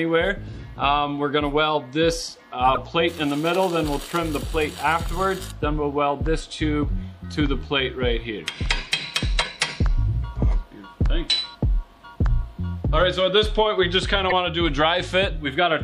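Plainly audible lossy encoding, likely MP3 compression at a low bitrate consistent with about 64 kbps, runs through the whole audio. The encoder lets weak frequency components flicker in and out between frames, giving a watery, swirling texture with smeared attacks. Damaged data in the compressed stream throws the decoder off its frames twice, from 2.74 to 2.78 s and from 14.29 to 14.32 s. Each time it loses sync and hunts for the next valid frame, producing a brief glitch of roughly 30 to 40 ms.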